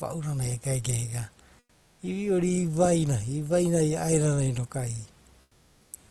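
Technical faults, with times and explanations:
1.59–1.99 s and 5.41–5.91 s: comfort noise in place of the background. The room background becomes flat, featureless hiss, about 4–5 dB quieter, likely Opus discontinuous transmission substituting synthetic noise.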